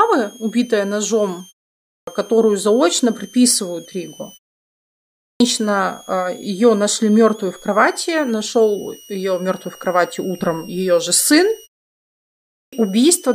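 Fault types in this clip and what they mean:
switching supply whistle: a faint high whistle throughout, wandering between about 2.7 and 3.4 kHz, from a switching power supply running in an audible burst mode or beating with another supply.
clipped start after a pause: speech starts abruptly at 1.84, 5.17 and 12.46 s, losing its first 0.23 to 0.27 s while the sleeping output device wakes.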